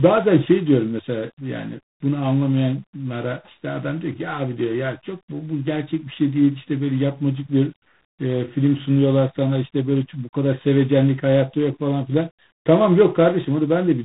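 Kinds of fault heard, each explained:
Tandem speech coding: the speech carries the layered damage of being coded, decoded and coded again, with each pass working on an already degraded signal. The roughness points to two low-rate ADPCM stages, consistent with G.726 at about 24 kbit/s, bridged by a G.711 A-law link. Nothing remains above 3.9 kHz, so the speech sounds muffled, and the grainy texture persists from start to finish.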